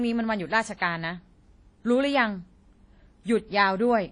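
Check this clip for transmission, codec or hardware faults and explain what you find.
One codec fault runs through the whole speech clip: likely WMA compression at a low bitrate, consistent with about 32 kbps. Long transform blocks smear quantisation noise around each syllable, producing ringing, washy hiss that breathes with the signal, and nothing remains above 10.1 kHz.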